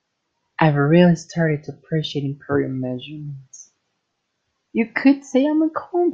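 No technical faults are audible anywhere in the recording.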